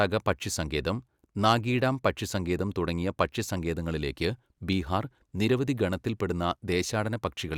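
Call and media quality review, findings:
No faults found in the speech clip; no dropouts, distortion or timing defects heard.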